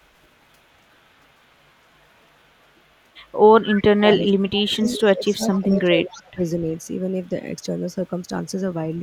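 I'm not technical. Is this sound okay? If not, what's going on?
No. Around 3.75, 4.83, 5.52 and 6.11 seconds you can hear a faint, delayed repeat of the speech, coming back about a quarter of a second late. This is echo leak, likely from a speakerphone whose echo canceller let some of its own loudspeaker sound return down the line.

Between 3.95 and 4.45, 4.61 and 4.93, and 5.16 and 6.39 seconds, the main speech dips sharply and partly drops out. This is speech suppressed in double talk: that same echo canceller likely mistook the talker for echo while both sides spoke, and turned both down.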